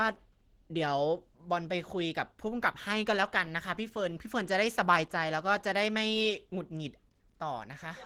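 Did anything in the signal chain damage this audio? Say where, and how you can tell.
Yes, at the codec stage: the speech sounds hoarse and plainly grainy from start to finish, with that roughness sitting over the whole band. That's likely Opus compression in its hybrid speech mode, and the damage fits a bitrate somewhere around 16 kbps.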